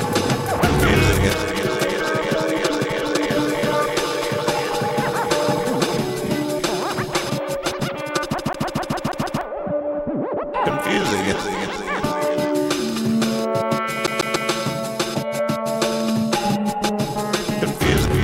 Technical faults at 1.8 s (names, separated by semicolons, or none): none